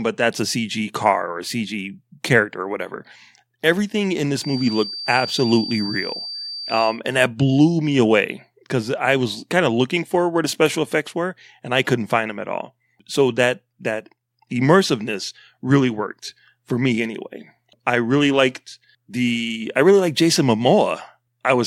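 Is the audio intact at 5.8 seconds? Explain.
No. From 4.33 to 7.01 s, ending just before "and that blew me", a thin, steady 4.7 kHz tone sits roughly 10 dB under the speech, swelling and fading slowly in level. This feedback whistle likely comes from a loudspeaker-to-microphone loop held right at the edge of feedback.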